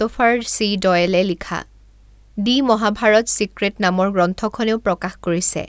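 No technical faults are audible.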